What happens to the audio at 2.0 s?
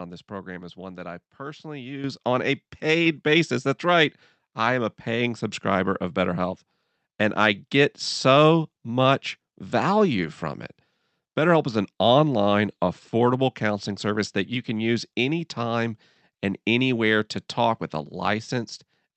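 Microphone volume stepped up at 2.04 s, just after "one that I personally": the call software raised the input gain by about 8 dB in one step, so speech and background jump together.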